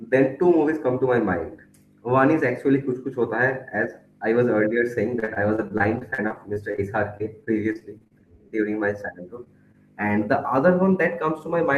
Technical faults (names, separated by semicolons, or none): repeated packet loss (robotic sound); jitter buffer slow-down; short concealed packet loss